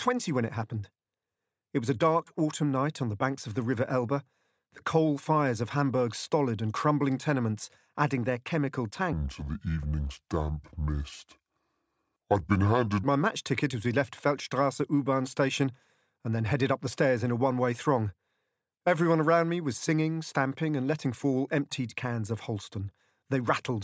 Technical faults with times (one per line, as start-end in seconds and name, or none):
9.13-13.03 wrong sample rate